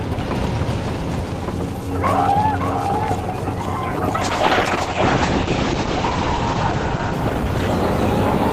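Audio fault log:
throughout doubled audio track: A second, full-band copy of the sound runs about half a second behind the first and about 5 dB quieter. The likely cause is the same signal being picked up again through a slower path or an edit leaving two copies out of step. It comes across as a flat, dry echo with no decay or room colour, so every onset is repeated.
4.22–8.53 s call bitrate drop: The call's bandwidth estimate fell and the encoder was cut from 40 kbps to 9 kbps, staying at that floor for about 2.2 s. With so few bits the codec quantises coarsely and narrows the coded band from 20 kHz to 8 kHz. From 4.22 s to the end, the sound turns muffled and loses its top end, with a rough, watery texture.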